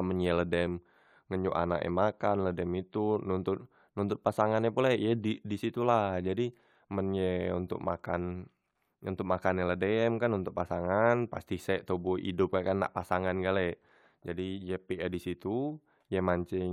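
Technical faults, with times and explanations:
No technical faults detected anywhere in the speech recording.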